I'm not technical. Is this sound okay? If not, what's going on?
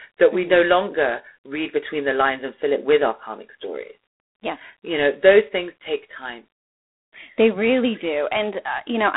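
No. G.726 ADPCM coding runs through the whole clip. This telephone codec doesn't store the speech itself. It keeps guessing each next moment of sound and sends only a rough correction, using very few bits. Here that correction is too coarse, so a harsh, rasping hiss rides along with the speech, louder when it is louder. The sound is also squeezed to a phone-line range, with nothing above about 3.9 kHz, so it sounds thin and dull.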